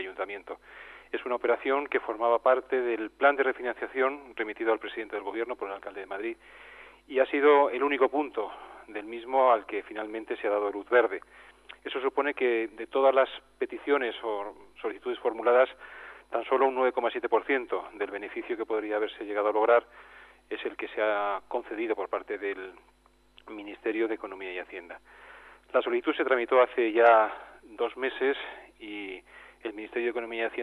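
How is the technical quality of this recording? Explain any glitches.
No audible glitches or faults.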